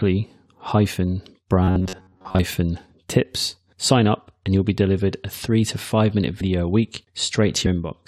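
From 1.63 to 2.39 s the speech turns into a rigid, metallic buzz pinned at 93.8 Hz while still roughly tracking the words. This is robotic sound from repeated short buffers, likely caused by audio arriving too seldom, so a slice of about 10.7 ms was replayed over and over in place of most of the real audio.

At 6.40 s and again at 7.65 s the audio lurches forward. These are compressed frames skipped, with the decoder jumping past whole 23.2 ms frames: about two frames (roughly 50 ms) at the first point and about three (roughly 70 ms) at the second.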